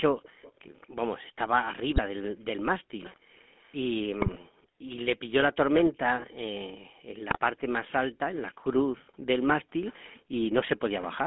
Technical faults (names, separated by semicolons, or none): GSM full-rate codec; GSM bit errors